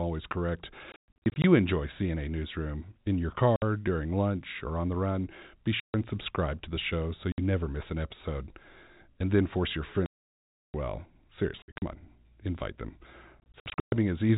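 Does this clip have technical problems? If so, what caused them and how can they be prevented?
Yes. Packet loss filled with silence cuts the speech at 0.92–1.44, 3.56–3.62, 5.8–5.94, 7.32–7.38 s (between "to the show so" and "never miss an episode"), 10.06–10.74 s (after "then force your"), 11.62–11.82 s and 13.4–13.92 s (after "on invite them"). The gaps are dead silence in multiples of 20 ms, which fits 20 ms packets, with hard edges. Concealment would instead smear or repeat sound. A jitter buffer with packet-loss concealment and forward error correction would prevent this.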